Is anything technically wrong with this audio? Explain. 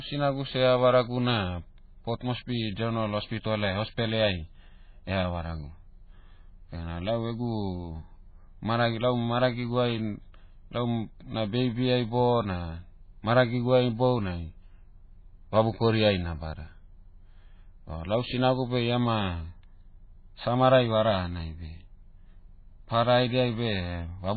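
Yes. Throughout the speech there is heavy MP3 compression damage, likely from a very low bitrate (around 16 kbps): treble is cut above 4.5 kHz, and weak frequency components flicker between frames, giving a watery, swirly sound with smeared attacks.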